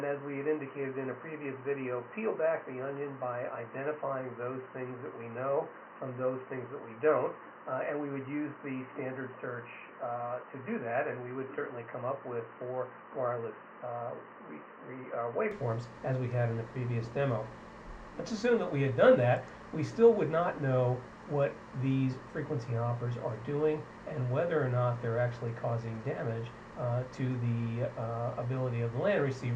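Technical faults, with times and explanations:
0.0–15.51 s: likely an input switched to a poorer device. The sound is dull with nothing above 3 kHz, about 5 dB quieter, with faint added noise. Full band returns at 15.51 s without any gap.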